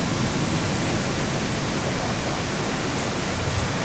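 From start to finish the speech is trailed by a second copy arriving roughly a third of a second late and about 7 dB down. That's echo with no canceller: the far end's loudspeaker leaks into its microphone, and the voice returns thinner, band-limited to 8 kHz like the call itself.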